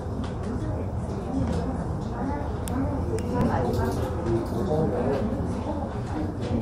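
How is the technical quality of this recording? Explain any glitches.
Three brief glitches interrupt the sound: two clicks and one tiny skip.

At 1.71 s and again at 4.93 s there are single sharp clicks, most likely from dropped samples. A fraction of a millisecond of audio goes missing, so the waveform leaps straight from one value to a later one instead of moving smoothly between them. Far too little is lost to hear any sound missing; what you hear is the step itself. On a spectrogram each appears as a thin vertical line running across the whole frequency range.

At 3.41 s comes a tiny skip, lasting about 10 ms to 3.42 s, caused by an overlap between stream segments. The stream appears to be built from chunks about 2 s long, and at this join the time stamps of adjacent chunks overlap. The player discards the overlapping stretch even though it held new audio, so roughly 10 ms vanishes and the waveform jumps at the seam. 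It shows as a vertical line on the spectrogram, and the waveform visibly breaks at that point.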